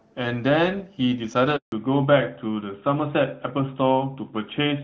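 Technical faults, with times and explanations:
1.56–1.72 s, handover gap: the speech fades out abruptly and leaves 160 ms of silence, because no speech frames arrived while the call switched networks.
1.72–4.84 s, fallback to narrowband: the voice turns duller and rougher, with nothing above 4 kHz, as the call drops from AMR-WB at 12.65 kbit/s to AMR-NB at 12.2 kbit/s.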